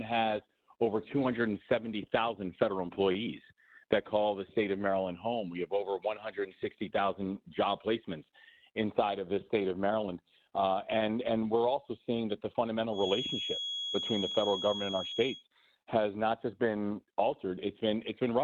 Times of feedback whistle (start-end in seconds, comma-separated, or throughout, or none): 12.89-15.45